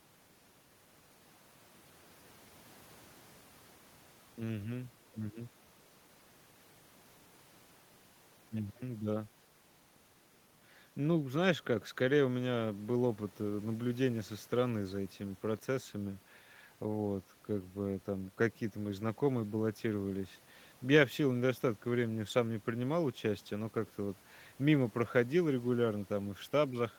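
No technical faults are audible anywhere in the speech recording.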